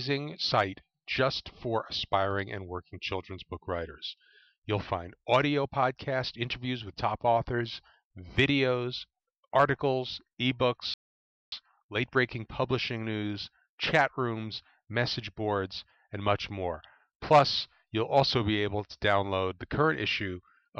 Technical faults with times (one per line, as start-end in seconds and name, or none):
10.94-11.52 rebuffering stall